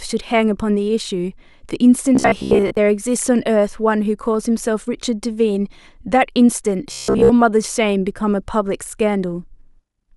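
From 2.15 to 2.77 s and 6.92 to 7.32 s, speech becomes a rigid metallic buzz at 66.7 Hz, robotic sound from repeated short buffers. This is likely a 15 ms block replayed while audio arrived late, filling about half the first stretch and most of the second.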